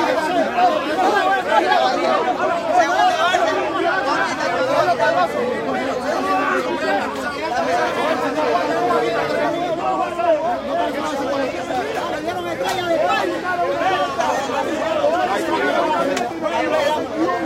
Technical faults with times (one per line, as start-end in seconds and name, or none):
none